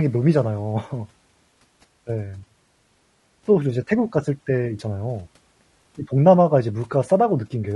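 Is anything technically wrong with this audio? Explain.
Yes. Throughout, likely low-delay AAC compression with short frames, fitting about 32 kbps, blurs harmonics, so the speech sounds rough and grainy, with noise between harmonics and a synthetic top band.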